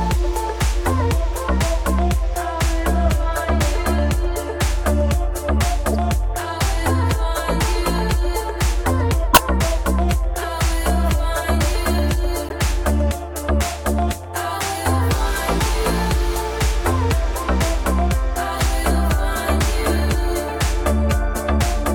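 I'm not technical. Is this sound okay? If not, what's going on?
No. There are four short glitches, each a corrupt frame decoded. A damaged chunk of compressed data got played anyway, so you hear quick chirps or noise blips at 5.92–5.95, 9.33–9.40, 10.39–10.44 and 12.41–12.53 seconds.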